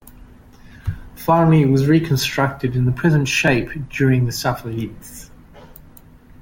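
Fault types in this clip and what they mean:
Overlap between stream segments: two consecutive segments claimed the same stretch of time, and the player trimmed away a few milliseconds of audio that was never actually duplicated. The waveform jumps, heard as a tiny skip at 3.48 s, between "reconstructed in its present" and "during the".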